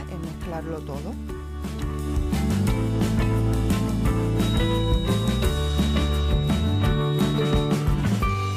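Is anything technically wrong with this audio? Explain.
Yes. From 4.34 to 7.78 s a feedback whistle sits about 15 dB below the sound: a thin 3.8 kHz tone that swells and fades slowly, likely from a loudspeaker-to-microphone loop held just at the edge of feedback. On a spectrogram it shows as a steady horizontal line.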